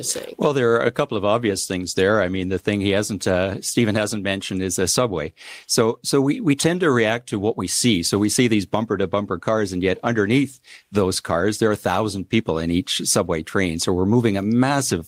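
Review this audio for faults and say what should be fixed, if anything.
No faults found; nothing needs fixing.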